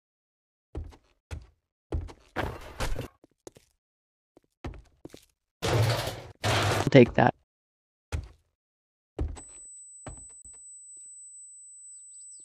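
A CD skip hits at 3.07 s, 6.86 s and from 10.42 to 10.45 s. Each time the laser jumps tracks and the player mutes, first for a few milliseconds, last for about 30 ms, then resumes elsewhere: a tick and abrupt discontinuity, seen as a flat waveform gap and a thin vertical spectrogram stripe.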